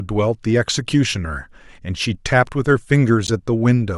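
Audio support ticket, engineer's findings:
Corrupt frame decoded at 3.27–3.30 s in the speech: brief chirp/noise burst, about 32 ms, peaking near -10 dBFS. Probable component: codec decoder. A single damaged compressed frame was played rather than concealed, so misread codes and gains put energy at wrong frequencies.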